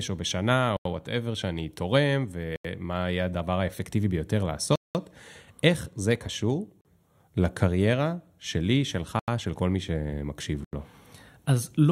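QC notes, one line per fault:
0.77–0.85, 2.56–2.65, 9.19–9.28, 10.64–10.73 s: block of digital silence, four identical 85 ms holes cut hard to silence with no fade. The fixed length fits a missed 4096-sample output buffer, unlike a faded dropout.
4.76–4.95 s: block of digital silence, a longer 193 ms hole with abrupt edges. The audio drops to plain silence, not the smoothed or repeated sound of concealment.
6.81–6.85 s: block of digital silence, a brief 40 ms gap. The audio cuts off with no fade.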